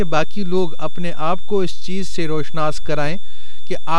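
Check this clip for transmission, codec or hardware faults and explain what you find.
Two hardware faults run through the whole speech clip, both rooted in the recording chain's power and analogue stages rather than in transmission or coding.

A switching supply whistle sits throughout as a thin high tone wandering between 3.48 and 3.56 kHz, roughly 25 dB below the speech. A converter running in burst mode, or beating with another supply, has landed in the audible band. Its drifting pitch separates it from mains hum, which stays fixed and low.

A DC offset is also present for the full length, shifting the waveform off zero by about −10 dBFS. It cannot be heard as sound. It shows as steady energy at exactly 0 Hz and eats headroom, unlike rumble, which fluctuates at low frequencies.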